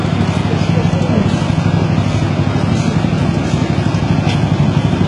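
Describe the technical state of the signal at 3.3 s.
At 3.3 s, as throughout, the treble is rebuilt rather than coded, likely from HE-AAC compression at a very low bitrate around 12 kbps: copied-up bands sound gritty and metallic, with nothing above 11 kHz.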